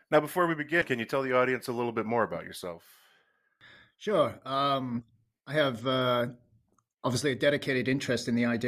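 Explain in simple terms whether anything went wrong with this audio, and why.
Compressed frames were skipped twice. At 0.81 s, between "before we" and "can you tell", and at 5.0 s, just before "I have uh", short chunks of speech vanish, so the audio jumps ahead.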